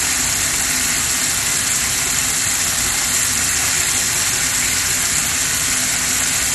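A recording of everyday sounds, dull and muffled across its whole length, with nothing above about 12.2 kHz and a gurgling, granular roughness clinging to what remains. Upper detail seems to flicker in and out as the sound changes. This is likely MP2 compression at a low rate, fitting roughly 64 kbps: too few bits to cover all 32 sub-bands, so the top bands are switched off and the surviving ones are coarsely quantised.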